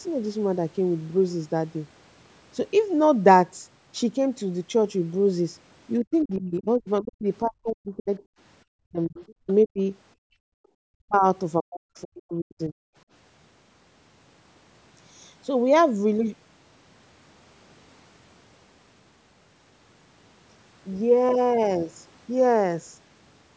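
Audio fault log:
6.04–8.20, 8.83–9.79, 10.87–11.25 and 11.58–12.76 s, speech suppressed in double talk: the talker's speech sinks by as much as roughly 40 dB, for well over a second in the first stretch. Both ends were likely talking at once, so the echo canceller turned everything down.
6.34–6.38 and 9.28–9.53 s, other side's voice leaking through: a faint second voice slips in, first as a brief scrap, then for about a quarter second, roughly 30 to 35 dB under the talker. This is likely loudspeaker echo left in the microphone by the canceller.
10.15–10.59 s, background gated by the echo canceller: the room sound drops away by about 37 dB for close to half a second, then returns. The echo canceller clamped the microphone while the loudspeaker played and released it afterwards.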